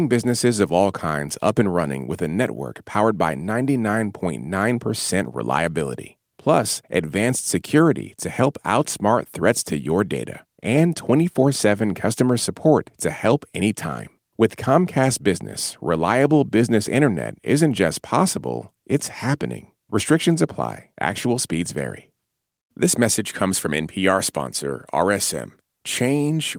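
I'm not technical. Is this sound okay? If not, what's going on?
Yes, this recording sounds fine, and there's nothing going wrong in it that you need to worry about.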